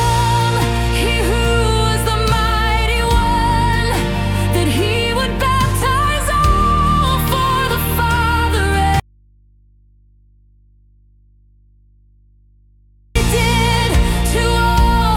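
At 9.00 s the sound drops out abruptly and stays gone until 13.16 s, a gap of about 4.16 seconds. This is an audio dropout to a faint residue: the wanted signal is lost, but the path after the break stays live, so the gap holds a low mains hum roughly 35 dB below the normal level, likely from an input left open after a lost connection. Unlike a pause or fade, the cut is instant and never truly silent.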